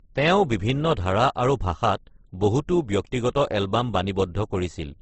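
Throughout, the speech is dull, with nothing above 8.3 kHz, and carries two layers of coding artefacts at once. This likely comes from transcoding between lossy codecs: an MP3 encode near 52 kbit/s, re-encoded as Opus around 16 kbit/s, which wastes bits on MP3 damage.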